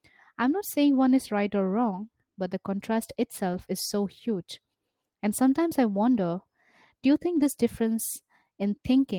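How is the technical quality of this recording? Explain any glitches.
Two short glitches occur in the speech: lost packets rebuilt from error correction, at 3.53 to 3.59 s and 7.35 to 7.45 s. The decoder filled each dropout with a low-bitrate backup copy carried in the following packet. There's no gap, but these stretches sound briefly rough and grainy.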